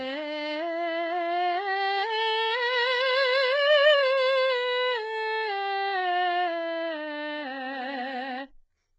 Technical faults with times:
0.00-8.99 HE-AAC compression

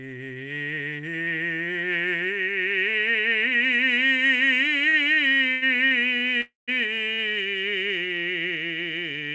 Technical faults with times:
4.90-5.93 repeated stalls (stutter)
6.41-6.70 call audio freeze

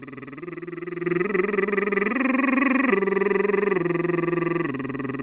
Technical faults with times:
5.22 sound dropped by the voice detector

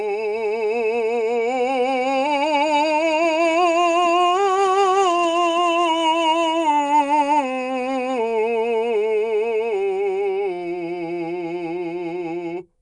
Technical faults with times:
0.00-12.81 Nellymoser compression

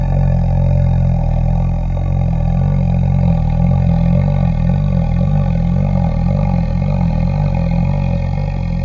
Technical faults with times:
0.00-8.85 wrong sample rate

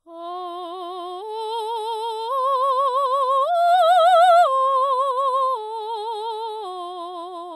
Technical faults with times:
none

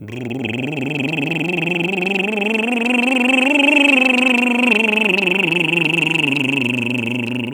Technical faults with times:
none

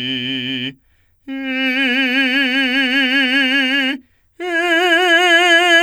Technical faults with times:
none

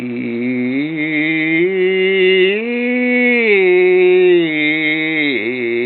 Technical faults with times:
none

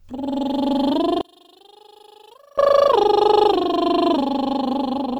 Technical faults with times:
1.21-2.58 one channel inverted

